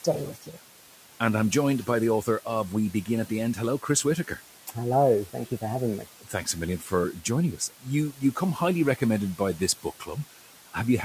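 Throughout, the background sinks between phrases and swells back under the speech. These are noise suppressor artifacts: the suppressor pulls the room noise, which sits about 18 dB below the speech, down by about 12 dB frame by frame.

At 0.35 to 0.56 s, 6.05 to 6.47 s, 6.8 to 6.91 s and 7.58 to 7.86 s, parts of the speech sound swallowed and faint, for roughly 100, 150, 100 and 100 ms respectively. This is speech cut by the noise suppressor. It mistook those soft sounds for noise and lowered them by about 10, 11, 8 and 12 dB respectively.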